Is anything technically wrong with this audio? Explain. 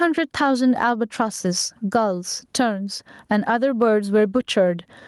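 Yes. Gain pumping runs through the whole speech clip. The level swings by something like 15 dB, and loud and quiet passages sit unnaturally close together, giving a squashed, flattened delivery. The likely cause is input gain set far too high, with a fast limiter or compressor clamping down on every loud sound and releasing in the gaps.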